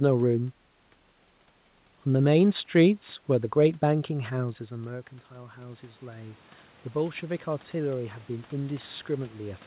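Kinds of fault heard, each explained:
Automatic gain rising: from 3.9 s to the end, voice and room noise swell together by about 12 dB, unlike a talker simply moving closer.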